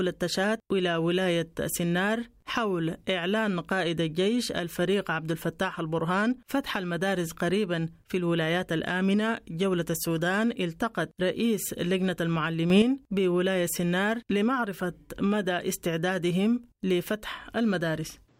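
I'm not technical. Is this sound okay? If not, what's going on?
No. A sudden gain jump happens at 12.7 seconds: the speech and the background noise both get noticeably louder at the same instant, through 12.82 seconds. The likely cause is a volume setting changing abruptly instead of fading smoothly.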